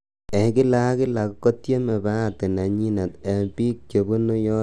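Throughout the speech, dull gurgling grain with upper bands flickering on and off, not a fixed low-pass, is likely MP2 compression, fitting roughly 80 kbps.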